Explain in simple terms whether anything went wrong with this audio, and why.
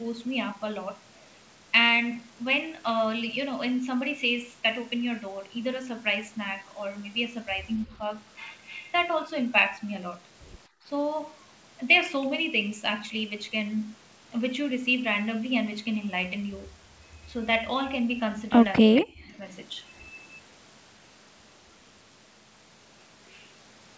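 Speech suppressed in double talk, at 7.85 to 8.01 s and again at 18.8 to 19.4 s: the speech dips slightly the first time and almost vanishes the second, likely because the echo canceller turned the speech down along with the echo while both sides talked.

Background gated by the echo canceller, at 10.68 to 10.85 s: the room sound drops out sharply for a moment while the canceller clamps down on the microphone.

Echo leak, at 18.76 to 19.01 s: a faint copy of the speech arrives about 0.23 s late, likely loudspeaker sound the canceller failed to remove.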